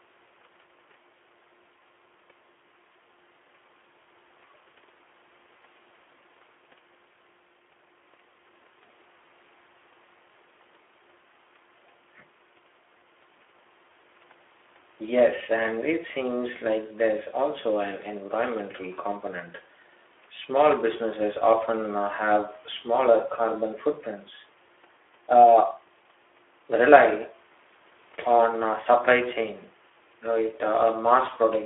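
Speech, with Speex codec damage throughout: the sound is hoarse and grainy, which fits a low bitrate near 11 kbps, and it sits in a 300 Hz to 3.4 kHz band. Unlike plain telephone band-limiting, the roughness is in the speech itself, not only missing treble.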